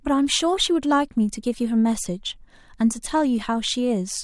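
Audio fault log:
No faults are heard anywhere in this speech.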